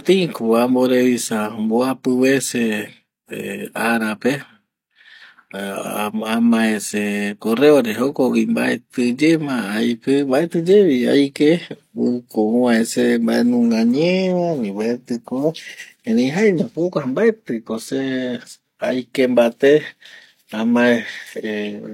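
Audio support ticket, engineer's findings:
Frames out of order, 5.75 to 5.96 s, just before "amae se correo re". Garbled flutter. Two adjacent blocks of about 93 ms arrived swapped and were decoded that way, which fits two-frame runs. Duration preserved.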